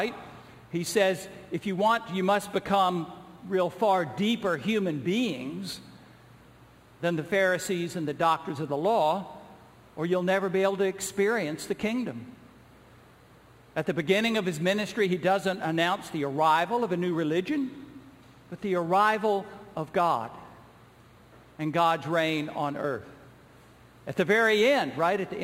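A gritty, inharmonic fizz rides on the louder and brighter parts of the sound from start to finish, sitting roughly 25 dB below the signal. This is crude rate conversion, with samples repeated rather than filtered, which fits a jump from 44.1 kHz to 48 kHz.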